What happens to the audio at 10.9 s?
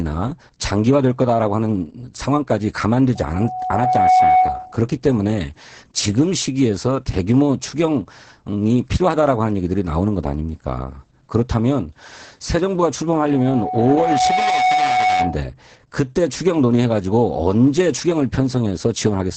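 At 10.9 s, as throughout, Opus voice compression is audible: heavy linear-prediction coding leaves muffled, hoarse, slightly robotic speech with nothing above 9 kHz, consistent with a bitrate near 10 kbps.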